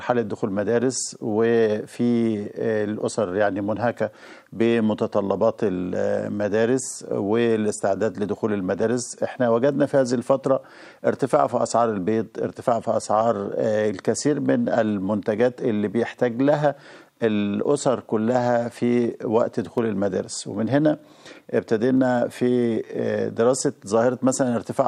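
A click recurs every 2.19 seconds, starting at about 2.25 s and running through 24.17 s, roughly ten in all. That steady spacing points to clock drift buffer slips: two clocks likely mismatched by around 70 ppm, so the buffer periodically drops or repeats a handful of samples.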